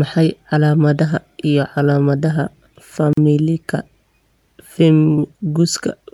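At 3.13 s the speech drops out for about 42 ms and resumes at 3.17 s exactly where it stopped, with slightly smeared edges. This is a gap at a join of encoded pieces: separately encoded segments were spliced untrimmed, leaving encoder start delay and final-frame padding as silence.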